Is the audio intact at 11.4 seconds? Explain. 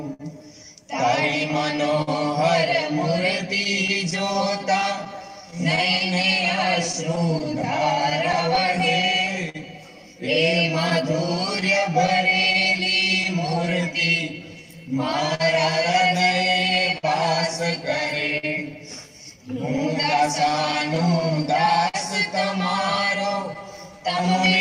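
No. Clock drift between sender and receiver runs throughout: the sender's clock is roughly 4% slow, so the buffer keeps draining and the receiver repeats short pieces. This produces recurring timing hiccups at uneven intervals rather than isolated dropouts. Scattered short gaps also span 0.13 to 24.49 s. About seventy lost packets, the longest around 50 ms, are each patched by extending the preceding sound. The result is brief ticks or smears that are sporadic rather than drift-paced.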